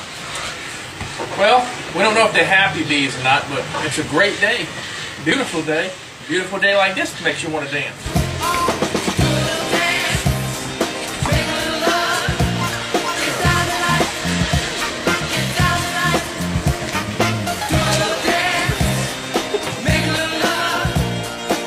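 At 5.32 to 5.34 s and 7.29 to 7.33 s, there is an overlap between stream segments. Two segments' time stamps collided, and the player trimmed the overlap. About 24 and 37 ms of real sound vanish. The waveform jumps. Each is a tiny skip. The spacing fits 2-second segments.

At 10.69 s comes a repeated buffer. New audio arrived late. The device replayed its last piece once more, with a hard join. The repeat is about 10 ms long, which fits a 10 ms buffer. Around 10 ms of sound is lost. It is heard as a click or brief buzz.

At 13.24 to 13.27 s, a third overlap between stream segments removes about 28 ms. The waveform jumps again, giving another tiny skip.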